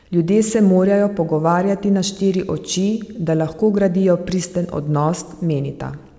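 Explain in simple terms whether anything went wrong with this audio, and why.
Nothing went wrong here: the speech travelled over an ordinary internet call link whose wideband codec keeps nothing above 8 kHz, and that top-end cut-off is simply how such calls sound, not a defect.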